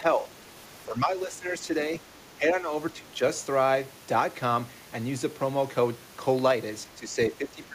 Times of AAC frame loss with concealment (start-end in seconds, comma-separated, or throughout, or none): none